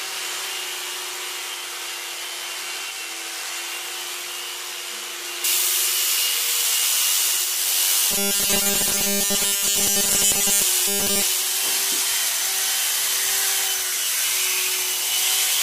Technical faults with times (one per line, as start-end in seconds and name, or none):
5.44-15.62 pre-emphasis left on
8.11-10.62 robotic sound from repeated short buffers
10.88-11.23 robotic sound from repeated short buffers